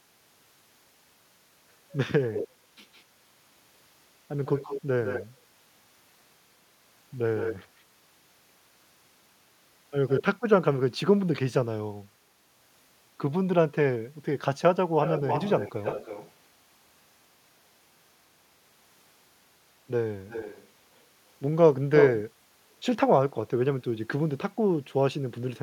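Echo leak at 2.32, 2.93, 4.45, 7.37, 10.08, 15.02, 20.28 and 21.97 s: a delayed copy of the speech trails 157 ms behind, then 316 ms from 15 s, faint to full level, likely loudspeaker pickup the echo canceller missed. Spectrograms show harmonics duplicated, shifted right.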